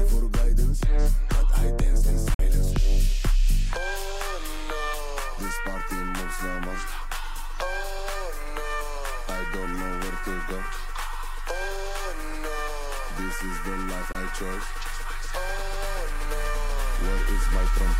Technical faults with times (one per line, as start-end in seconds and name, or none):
2.34-2.40 Bluetooth dropout
14.12-14.15 Bluetooth dropout